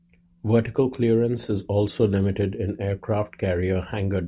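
Nothing in the recording stood out as a technical fault on listening.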